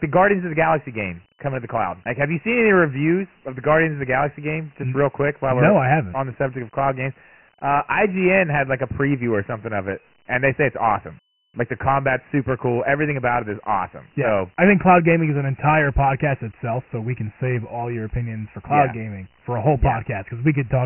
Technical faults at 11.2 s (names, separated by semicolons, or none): Dialogic VOX ADPCM